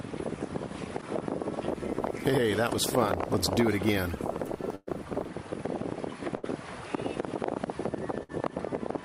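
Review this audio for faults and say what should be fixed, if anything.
Bursts of packet loss left three gaps: at 4.75–4.90 s about 120 ms of audio is missing, concealed for roughly 114 ms by extending and fading the last sound, then 30 ms of silence. At 6.37–6.46 s and 8.23–8.32 s about 60 ms drops, bridged by a decaying held buzz or hiss before playback resumes further on. A larger jitter buffer with forward error correction or packet redundancy on the transport would prevent these dropouts.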